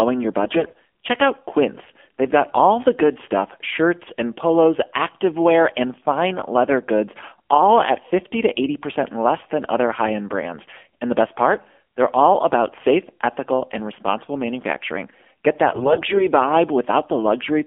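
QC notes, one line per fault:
throughout: AMR narrowband mobile codec. Band-limited telephone sound, roughly 250 Hz to 3.4 kHz, with plainly audible synthetic buzz from pulse-driven voice-model coding, consistent with about 7.4 kbps AMR-NB.
0.44–0.79 s and 15.68–16.26 s: AMR bit errors. Hoarse, scratchy, gargly bursts as flipped frame bits misplace excitation pulses and skew pitch, gain and spectrum values.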